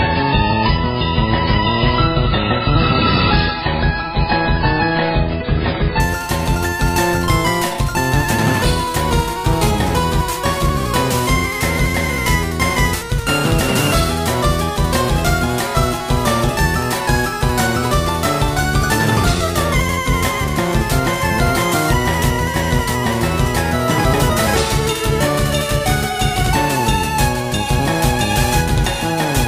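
From 0 to 6.0 s the audio shows an adaptive stream starting at a low bitrate: the top end is missing above 5.3 kHz and codec smearing is stronger, which fits roughly a 16 kbit/s start. At 6.0 s the quality jumps without a gap. On a spectrogram, a flat ceiling abruptly lifts.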